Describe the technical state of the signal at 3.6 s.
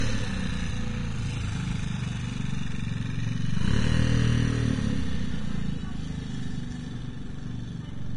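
At 3.6 s the audio carries heavy lossy-codec damage that runs through the whole clip, likely from Vorbis compression at a low setting, consistent with a rate near 31 kbps. Treble is coarsely quantised, so fine detail turns into grainy, hissy noise and attacks blur. On a spectrogram, energy stops abruptly at about 10.5 kHz, with blotchy, smeared patches below; the waveform shows softened transients rather than crisp onsets.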